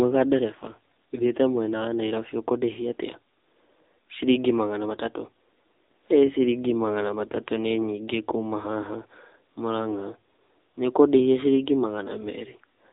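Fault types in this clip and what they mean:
AMR narrowband mobile codec: the speech was carried through the AMR-NB phone codec at a low mode, which fits 7.95 kbps, rebuilding it from a vocal-tract model, so nothing above 3.8 kHz survives and the voice sounds plainly buzzy and synthetic.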